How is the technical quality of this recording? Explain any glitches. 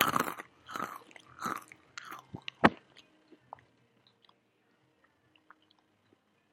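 No audible technical faults or glitches anywhere in this recording of sounds.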